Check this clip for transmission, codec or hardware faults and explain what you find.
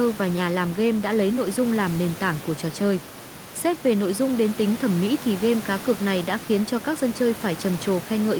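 Nothing stood out on listening to this speech recording beyond the room's own background noise, which sits about 13 dB below the speech.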